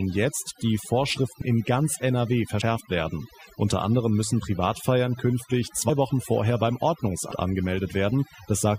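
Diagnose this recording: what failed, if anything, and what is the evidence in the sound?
Two stages failed: call processing and the codec.

Overdone noise removal runs through the whole speech clip. Pauses collapse to near silence flecked with twinkling specks, and low-level parts of the voice are gated out with the noise. This differs from low bitrate codec smearing: the artefacts track the noise floor and pauses, not the loud speech, which points to a noise suppressor set far too aggressively rather than to coding loss.

Compressed frames are skipped at four points: 1.41 s, just before "in ganz"; 2.61 s; 5.89 to 5.92 s; and 7.31 to 7.36 s, right after "vorher beim". Each time the speech jumps forward, by roughly 70 ms at the first three and around 150 ms at the last, which fits whole 20 ms frames being lost. Losing audio in whole-frame lengths distinguishes these skips from a sample-level buffer dropout.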